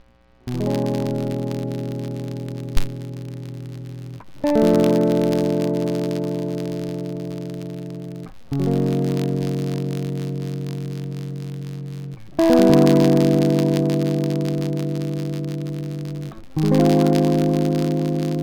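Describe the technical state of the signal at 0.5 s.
At 0.5 s the music carries the filter restarted on every block fault, which runs through the whole clip. The filter drops its state at each block boundary and starts again from silence, so every block opens with a small transient. This is heard as a buzz at 93.8 Hz, which fits a 512-sample buffer, and it rises and falls with the music's level. A waveform shows evenly spaced spikes. A spectrogram shows a harmonic comb on 93.8 Hz multiples.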